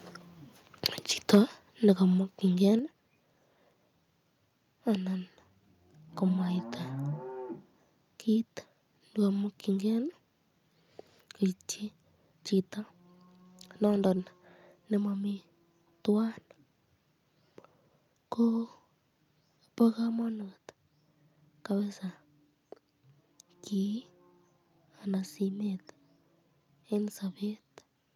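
At 0.85 to 0.87 s and again at 1.33 to 1.38 s the loudest syllables take on a harsh, crackling edge, most likely microphone overload: the input level drives peaks about 10 dB and then about 7 dB past what the converter can represent, so their tops are sheared off. On a waveform the peaks appear as flat plateaus, a small fraction of samples in the first burst and a much larger share in the second. On a spectrogram each burst shows as a brief vertical smear of added high-frequency energy.

At 1.35 s, in the middle of the second distorted burst, the speech and the background beneath it drop suddenly by about 4 dB. The level drops again by about 6 dB at 2.79 s and by about 2 dB at 20.22 s. This pattern is the microphone volume being stepped down, likely by call software reacting to a loud or clipping input by lowering the input setting. On a waveform each step shows as an abrupt narrowing of the envelope. 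On a spectrogram the whole band, noise floor included, dims at once.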